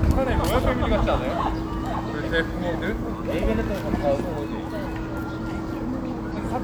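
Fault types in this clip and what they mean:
Damaged data in a compressed stream: corrupted bytes near 6.32 to 6.37 s make the decoder misread frames and lose sync, giving a brief glitch of about 54 ms; a spectrogram shows a short broadband smear or blocky patch, the waveform a break in the surrounding sound.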